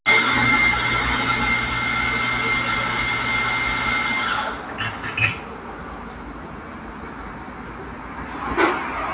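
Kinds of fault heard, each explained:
Noise suppressor applied to music or sounds: Throughout the clip, a suppressor tuned for speech treats the steady parts of these everyday sounds, sustained tones, background ambience and decaying tails, as noise and pulls them down while sharper onsets pass. The level therefore swings by roughly 5 dB, so the sound pumps and thins between attacks. All of this sits inside a band that stops at 4 kHz, which fits a narrowband G.711-style call path.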